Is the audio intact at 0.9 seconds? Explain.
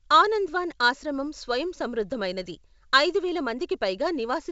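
Yes, the audio is intact at 0.9 s, with the speech coming through the G.722 wideband telephone coding at 64 kbit/s, which leaves nothing above about 7.7 kHz.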